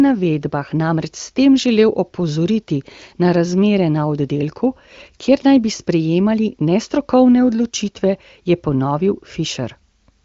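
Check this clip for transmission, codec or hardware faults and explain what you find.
No transmission, codec or hardware faults turn up in this clip.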